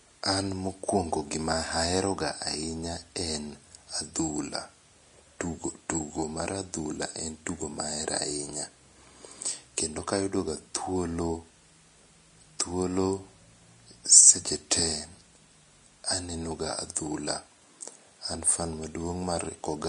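Speech, with audible Vorbis compression damage throughout. The spectrum stops abruptly at about 10.6 kHz, and the treble below that cut-off is hissy and granular, so fine detail turns into noise of similar energy. Tones sound roughened and consonant attacks are blurred. The likely cause is Vorbis encoding at a low quality setting, where the coarse residue quantisation fits a bitrate in the region of 34 kbps.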